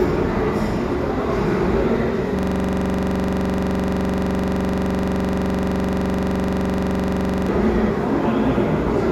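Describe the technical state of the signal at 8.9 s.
At 8.9 s the signal is intact, with no audible fault.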